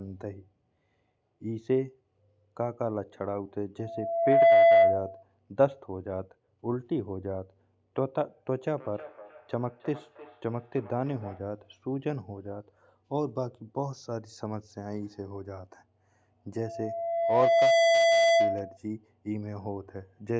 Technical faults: loudspeaker feedback squeal; feedback echo between two devices

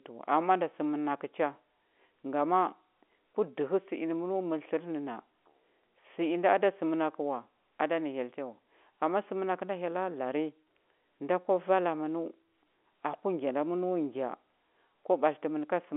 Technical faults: none

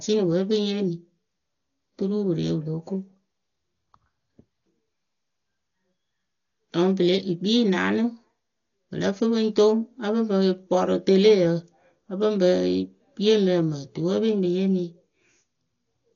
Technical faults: Dolby Digital compression

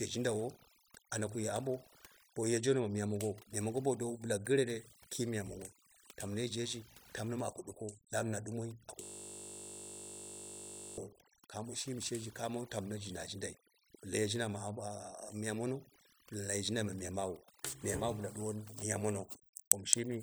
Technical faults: overdone noise removal; system hang loop

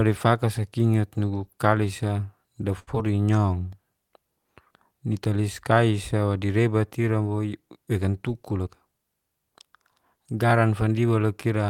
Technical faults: short stall from a late packet; short concealed packet loss; jitter buffer speed-up

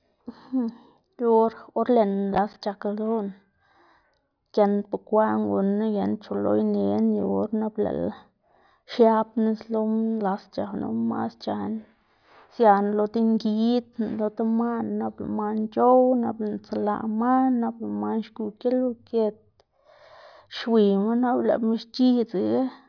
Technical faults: none

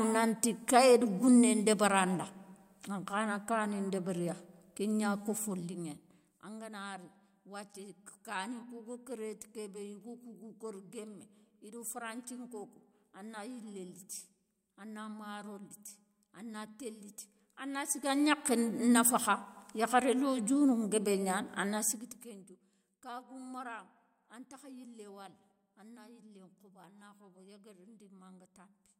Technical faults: zipper noise

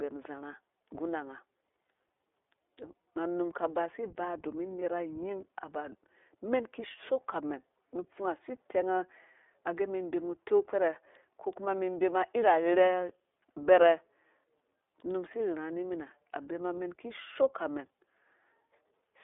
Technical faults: iLBC codec; lost iLBC frames

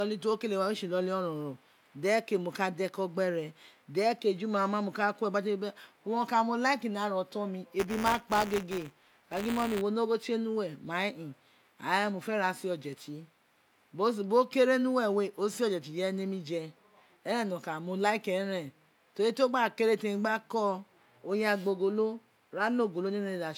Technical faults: buffer tearing

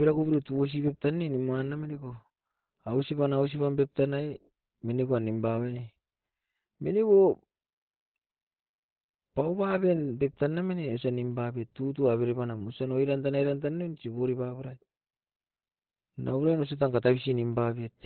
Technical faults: Opus compression

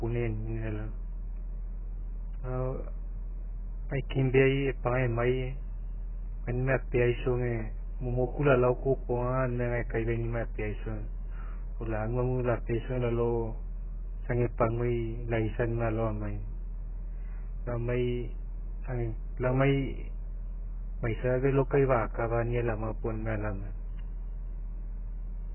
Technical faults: AAC compression

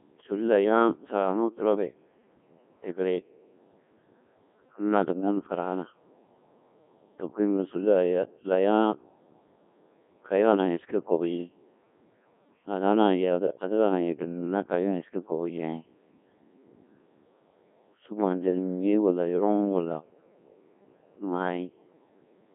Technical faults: Codec 2 vocoder

